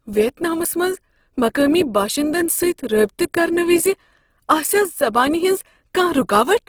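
Right from the start the whole clip has that grainy, rough texture that points to Opus compression in its music-style mode, likely at a low rate somewhere around 16 kbps. Bands get filled in with noise instead of left empty, so the speech sounds gritty rather than swirly.

At 1.61 s and again at 4.62 s there's a quick click, a tiny stutter. That's overlapping chunks. The audio was handled in pieces about 3 s long, and each new piece started a touch early, so roughly 7 ms gets played twice at every join.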